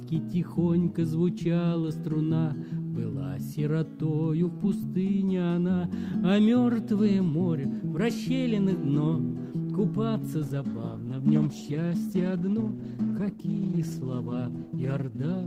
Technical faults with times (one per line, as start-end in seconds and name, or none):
10.45-15.46 call bitrate drop